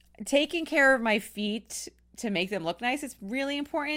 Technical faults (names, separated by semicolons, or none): none